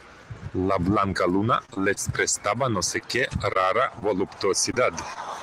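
Speech with packet-loss damage in three forms. From 1.65 to 1.98 s and again from 2.98 to 4.03 s comes repeated packet loss with a robotic sound. Several gaps arrive in quick succession, four in the first stretch and five in the second, each patched by extending the preceding sound. Because the holes keep recurring, the result is a choppy, robotic texture rather than a single blip. The first stretch is the harsher, with about a quarter of its span concealed. At 4.71 to 4.75 s and 4.75 to 4.78 s, two short concealed packet losses in a row each drop about 20 ms and blend the gap back in. This leaves a brief smear or wobble instead of a sustained robotic run. At 5.14 to 5.18 s, a short stall from a late packet holds the sound for about 18 ms with nothing lost. That stretched-then-resumed quality is what separates it from real loss.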